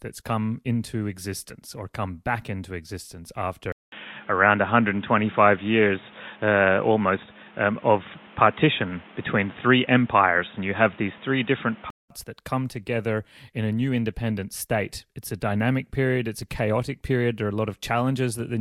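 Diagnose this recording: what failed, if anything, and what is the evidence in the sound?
Input switched to a poorer device, likely at the driver stage: from 3.72 to 12.10 s, after "come back into existence", a 200 ms silence, then nothing above 3.8 kHz, a roughly 5 dB level shift and new noise about 30 dB down. A codec bandwidth drop would leave the noise floor and level unchanged.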